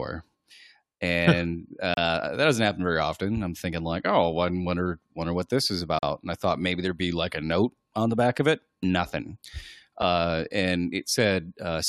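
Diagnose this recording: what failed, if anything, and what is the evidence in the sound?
What failed here is the playback side of a segmented stream: a gap between stream segments, three times. Hard-edged silences cut into the speech at 1.94 to 1.97 s (about 31 ms), 5.99 to 6.03 s right after "wonder what this is" (about 40 ms), and a tiny 5 ms one at 10.02 s. They're spaced 4 s apart, so each segment's timestamps leave a small hole that the player fills with silence. Nothing gets dropped; time is just inserted.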